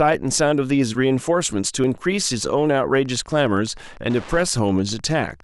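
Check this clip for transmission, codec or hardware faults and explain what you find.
Two faults are audible in the speech: an overlap between stream segments, twice, and Wi-Fi interference.

The overlap between stream segments appears at 1.84 s and again from 3.80 to 3.82 s. Each is a small click or skip. Two stream segments claimed the same moment, and the player trimmed real audio, so the waveform jumps. The spacing fits 2-second segments.

Wi-Fi interference runs from 2.92 s to the end. It is a steady tick about ten times a second, sitting well below the speech at about 25 dB under it. A nearby Wi-Fi radio sends a beacon every 102.4 ms. The audio circuit rectifies that burst into the signal.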